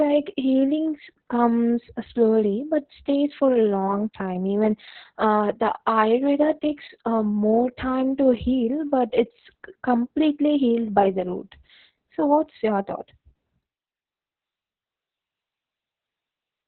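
Right through the speech there's heavy Opus voice compression, narrowband SILK with nothing above 4.2 kHz, sounding muffled, hoarse and a bit robotic, like a very low bitrate around 6 kbps.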